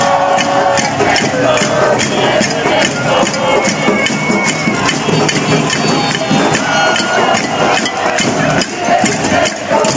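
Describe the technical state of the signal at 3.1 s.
At 3.1 s the signal shows gain pumping, which runs through the whole clip rather than starting or stopping there. The level breathes, swinging by around 10 dB. Loud and soft passages sit close together, and the sound feels squashed. The likely cause is input gain set far too high, with a fast limiter or compressor clamping down on each peak. The band stops near 8 kHz, as expected from call microphone processing.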